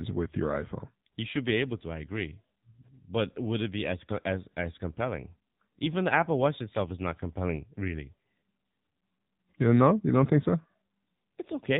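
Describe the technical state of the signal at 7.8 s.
At 7.8 s the speech carries AMR narrowband mobile codec damage, present across the whole recording rather than at that moment alone. The coder resamples to 8 kHz and rebuilds the voice from a vocal-tract model excited by sparse pulses, so nothing above 4 kHz survives and the tone turns plainly buzzy and synthetic, consistent with a low mode near 8 kbps. A simple low-pass would muffle the sound but stay natural. This damage adds a mechanical, frame-by-frame roughness.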